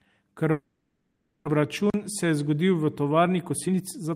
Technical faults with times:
0.51-1.49 long network dropout
1.90-1.94 block of digital silence
3.27-4.12 jitter buffer speed-up

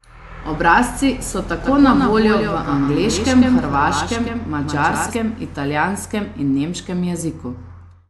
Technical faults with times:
1.61-5.15 doubled audio track

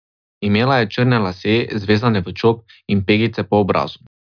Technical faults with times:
none

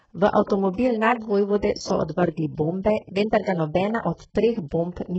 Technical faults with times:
0.00-5.19 HE-AAC compression
0.46-0.50 pre-echo

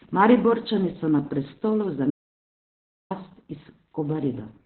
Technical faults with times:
0.00-4.66 Opus voice compression
2.10-3.11 audio dropout to silence

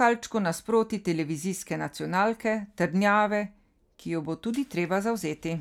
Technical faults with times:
none

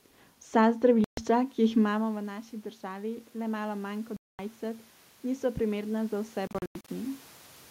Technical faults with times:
1.04-1.17 Bluetooth dropout
1.95-7.27 automatic gain rising
4.17-4.39 Bluetooth dropout
6.47-6.88 Bluetooth dropout

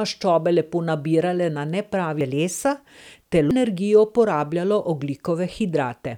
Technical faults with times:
2.21 compressed frames skipped
3.51 compressed frames skipped

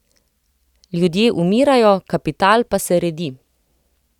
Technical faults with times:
none

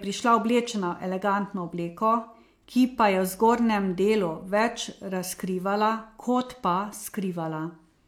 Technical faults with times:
none

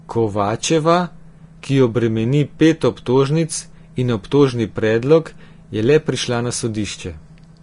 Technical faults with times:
0.00-7.63 Vorbis compression

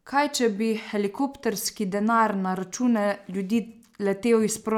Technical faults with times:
none

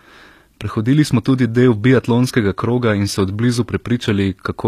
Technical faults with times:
0.00-4.67 HE-AAC compression

